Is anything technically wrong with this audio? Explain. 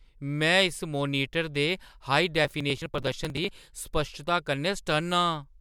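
Yes. From 2.45 to 3.49 s, processor overload crackle: an overloaded processor skips dozens of roughly 10 ms buffers, giving dense gritty tearing, not one dropout.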